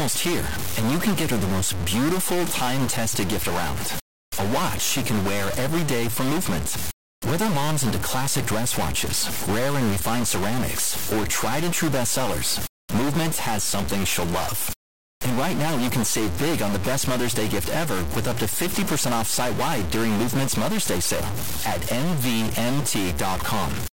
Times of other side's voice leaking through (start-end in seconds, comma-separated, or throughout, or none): none